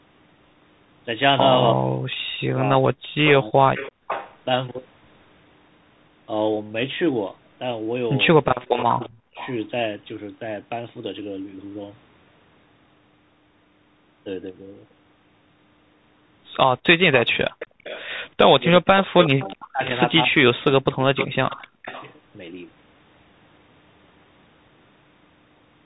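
Speech runs for all of the roughly 26 s through a muffled, narrowband channel. Nothing above 4 kHz survives, s sounds come out scratchy, loud bright sounds break up, and a fine granular hiss sits under everything. That is the Bluetooth CVSD headset codec, with plainly audible damage. It sends one bit per sample at 64 kHz saying only up or down, which fits a 64 kbps link. Its adaptive step cannot keep up with fast, strong high-frequency movement, so those sounds distort. Three times the speech sags or breaks into pieces, dropping by around 40 dB at its deepest. This happens from 1.74 to 3.8 s (about one and a half seconds affected in total), 8.61 to 9.38 s (under a second) and 18.59 to 21.7 s (about one and a half seconds again). This is speech suppressed in double talk: with both sides talking, the echo canceller likely could not tell the talker from loudspeaker echo and pulled everything down. 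Overlapping these stretches is an echo leak, a delayed copy of the speech coming back. It runs from 3.25 to 4.36 s, lagging about 336 ms at about 10 dB below the speech. It returns from 8.44 to 9.52 s, lagging 347 ms at about 20 dB down, and from 17.12 to 22.12 s, lagging 369 ms at about 15 dB down. It is likely residue from a loudspeaker that the canceller failed to remove and sent back. Finally, from 17.58 to 17.84 s the room sound briefly ducks by about 27 dB for around 200 ms, then returns. That is background gated by the echo canceller, which clamped the microphone while the loudspeaker played and released it moments later.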